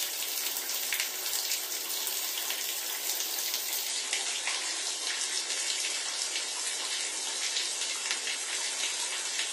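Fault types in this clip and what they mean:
Adaptive stream at a lower bitrate: from 3.88 s to the end, the sound abruptly loses everything above 11.5 kHz and gains swirly codec artefacts, fitting a switch to a much lower-bitrate version. Unlike a dropout, there is no gap, just a sudden, sustained drop in quality.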